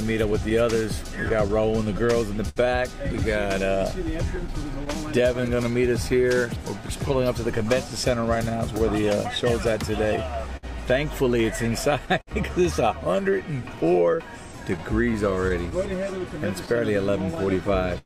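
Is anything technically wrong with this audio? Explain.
Yes. Clock drift between sender and receiver runs throughout: the sender's clock runs roughly 5% slow, so the receiver's buffer keeps draining and must be propped up.

Repeated timing corrections, 0.04 to 17.55 s: the receiver stretches the audio to 98% speed, adding around 400 ms, which is heard as a faintly dragging, uneven tempo.

Scattered short gaps at 0.49 to 2.58 s (about five, longest around 70 ms), 4.18 to 12.29 s (about twenty, longest around 50 ms) and 14.77 to 18.05 s (about seven, longest around 70 ms): lost or late packets are patched by continuing the last sound, leaving brief ticks and smears.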